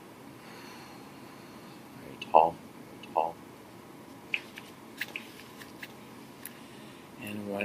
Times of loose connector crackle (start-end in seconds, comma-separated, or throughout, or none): none